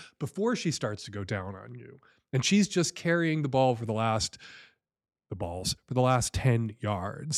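Nothing in the recording stood out as a technical problem on listening.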